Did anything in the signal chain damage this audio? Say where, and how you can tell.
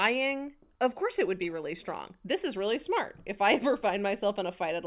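No, nothing along the chain left an audible mark on this speech, so there's no stage to point to here.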